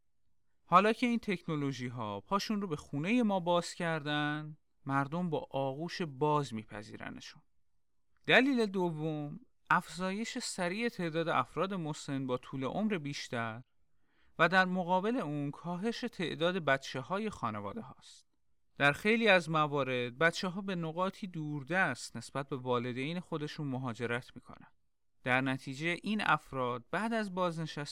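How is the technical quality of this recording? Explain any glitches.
No technical faults can be heard in this speech recording. There are no glitches to explain anywhere in the clip.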